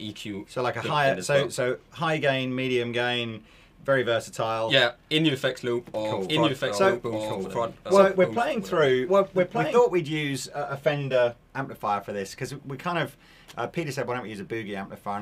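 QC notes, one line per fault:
6.28–9.80 s, doubled audio track. A second full-band copy of the sound runs about one second behind, at roughly the same level as the original. It carries no decay or room colour and cuts in and out abruptly. Likely a slower second capture path or an out-of-step edit.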